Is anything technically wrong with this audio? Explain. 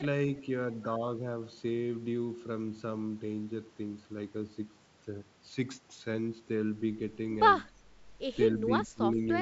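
Yes, there's one problem near the very end. From 8.86 to 9.21 s the speech drops by around 15 dB and thins out in pieces. That pattern looks like speech suppressed in double talk, likely an echo canceller that couldn't tell the talker from far-end echo and pulled everything down while both sides spoke. The wideband G.722-style coding, with content topping out near 7.7 kHz, isn't part of the fault.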